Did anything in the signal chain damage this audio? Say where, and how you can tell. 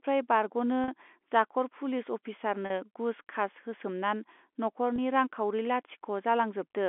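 Yes. The damage happened in the network stage: packet loss with pitch repetition. There are three short dropouts. The ones at 0.84 s and 2.66 s each last about 40 ms, which fits two lost packets. The one at 4.96 s lasts about 20 ms, which fits one packet. None is long enough to fade to silence. Each sounds like the speech briefly holds on a slightly buzzy tone. The receiver filled each gap by looping the last pitch period. The G.711 telephone band, 250 Hz to 3.5 kHz, carries the speech around these gaps.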